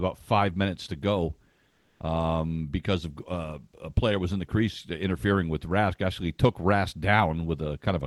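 Between 1.68 and 2.00 s, after "five minutes to go" and before "um because", the real background gives way to comfort noise: a flat, featureless hiss, about 1 dB different in level, sitting about 44 dB below the loud parts. The likely cause is discontinuous transmission in an Opus call path, whose audible band stops near 12 kHz.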